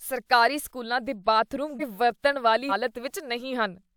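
Compressed frames are skipped from 1.79 to 1.83 s and from 2.69 to 2.72 s. The speech jumps ahead about a second, then about 150 ms.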